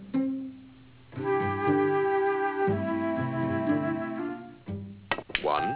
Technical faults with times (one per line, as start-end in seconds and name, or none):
0.00-5.76 aliasing